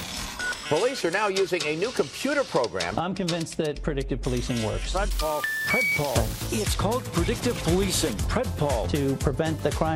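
An unreliable data bit corrupts the audio from 5.11 to 6.47 s: one marginal data line flips at random, adding identical spikes of about -28 dBFS that sound like a steady fizz. Unlike clipping distortion, it persists through pauses and doesn't follow the signal's level.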